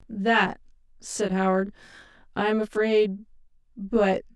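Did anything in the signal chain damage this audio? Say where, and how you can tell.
Yes. Throughout the speech there is a channel delay (comb filtering): one channel arrives about 20 ms behind the other, which points to a driver or buffer stage. When the two are summed to mono, content common to both cancels at evenly spaced frequencies, starting somewhere around 20 Hz. The voice sounds rough and slightly doubled. A spectrogram shows fixed, closely spaced dark horizontal notch lines across the whole clip, and the waveform shows a smeared, doubled onset on each syllable.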